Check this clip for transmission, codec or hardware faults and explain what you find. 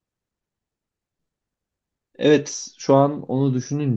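Nothing in this speech recording stands out as a transmission, codec or hardware problem, so there's nothing to flag here.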